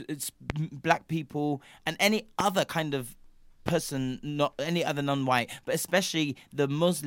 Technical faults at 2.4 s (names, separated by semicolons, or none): loud pop